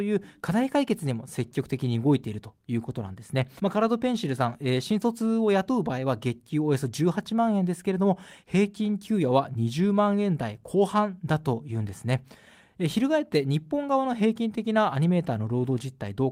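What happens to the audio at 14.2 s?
Nothing goes wrong at 14.2 s; the speech carries on intact through that moment with no audible dropout, click or distortion.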